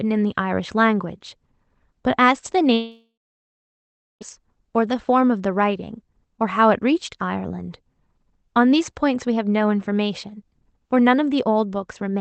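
Speech carried over a call codec, band-limited to about 8 kHz. From 2.73 to 4.23 s a long network dropout likely occurs. The last sound fades into silence lasting about 1.09 s, and roughly 1.5 s of audio never returns.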